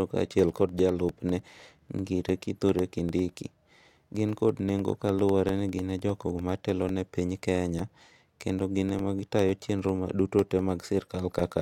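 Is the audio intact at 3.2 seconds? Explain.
No, 3.2 s falls inside periodic USB or driver dropouts running from 0.09 to 11.49 s: every 0.1 s roughly a millisecond drops to silence, ticking through the speech.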